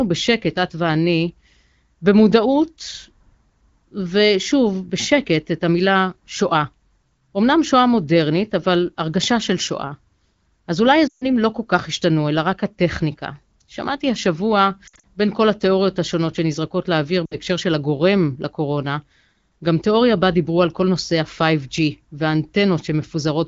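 At 11.07 s the speech breaks up from lost AMR speech frames. Corrupted frames failed their checks, so the wideband decoder repeated its last pitch and vocal tract settings at falling gain for about 140 ms. The sound drops to near silence within two frames, seen on a spectrogram as frozen harmonics cutting off quickly. At 14.87 s scattered losses, the longest 60 ms, give a stuttering warble. At 17.26 s a 60 ms gap drops the voice briefly to near silence, and the speech returns rough for a moment.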